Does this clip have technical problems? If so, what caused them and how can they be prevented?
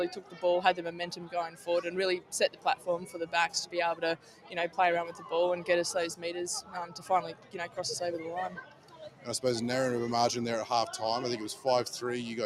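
Yes. A noise suppressor applied to music or sounds is active throughout. Because it is tuned for speech, it treats sustained, steady material as noise and keeps pulling it down by around 10 dB, so the level pumps rather than dropping out completely. To prevent this, bypass speech noise suppression for non-speech sources.

Sound cut by the noise suppressor occurs at 0.11–0.44, 0.78–1.68, 2.49–3.34, 3.95–4.78, 5.11–5.27, 6.62–7.1, 7.33–7.78 and 8.55–9.27 s, with dips of about 7 to 10 dB. A dropout or hard gate would also remove the onsets, but here they survive while the held portions and decays sink. To prevent this, switch the suppressor off or use a music mode.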